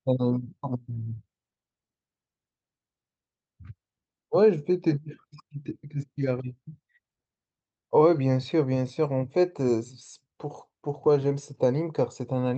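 No technical faults are audible.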